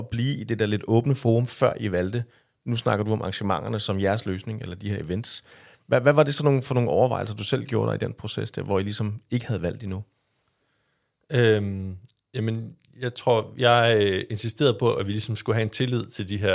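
No technical faults occur at any point in the recording.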